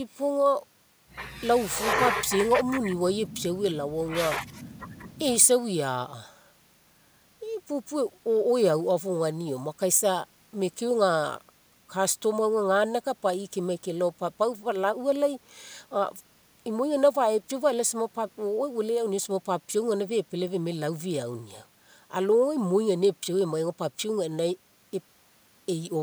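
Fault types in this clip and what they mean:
There are no fault types in this clip.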